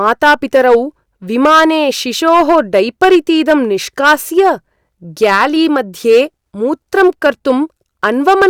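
From start to finish the speech shows hard clipping: driven about 8 dB past the limit of the stage, about 3 percent of samples are sliced flat. That produces gritty crackle on loud syllables, abrupt and edgy rather than the rounded warmth of soft saturation.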